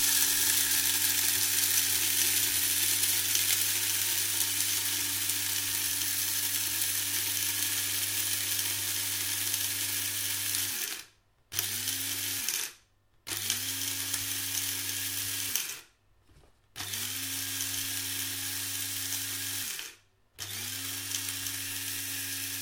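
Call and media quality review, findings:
Nothing stood out on listening, and no finding is raised for this clip.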